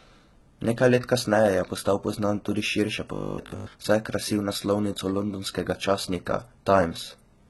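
Right from the start, the speech carries heavy codec damage that sounds likely to come from HE-AAC compression, consistent with a low bitrate around 16 kbps. The treble is rebuilt by copying lower bands upward, so the sibilants turn gritty and metallic, and nothing survives above 11.8 kHz.

From 3.14 to 3.74 s, just before "saj je krasil", there's a robotic sound, likely from repeated short buffers. A 50 Hz buzz points to 20 ms chunks being replayed while fresh audio is skipped. Most of that stretch is repeats, so it goes rigid and machine-like.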